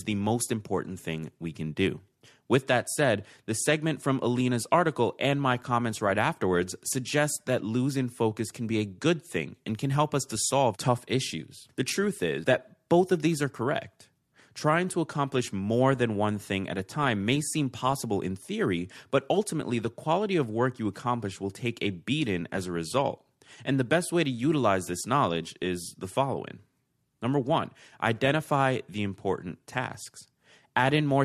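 No technical faults are audible.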